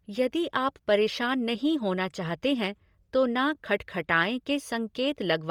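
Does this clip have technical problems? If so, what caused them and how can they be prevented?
Yes. Throughout the speech, the upper spectrum sounds breathy and grainy, likely from Bluetooth LC3 compression. Heavy coding damage fits 10 ms frames at roughly 32 kbps. A spectrogram shows blocky, noise-filled high bands replacing fine detail, with nothing above 21.3 kHz. Preventing this means recording over a wired link or raising the LC3 bitrate.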